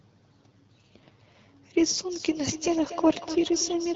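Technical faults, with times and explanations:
0.50 to 1.60 s, AMR rate drop: the speech turns rougher and more synthetic without losing band or breaking up. The grain fits the wideband codec being pushed from 12.65 down to about 6.6 kbit/s on a weak link, spending bits on error protection.
2.11 to 3.96 s, feedback echo between two devices: each stretch of speech comes back roughly a fifth of a second later, thinner and ringing, at most about 14 dB below the original. A second device in the room replays the call into a microphone its echo canceller doesn't cover.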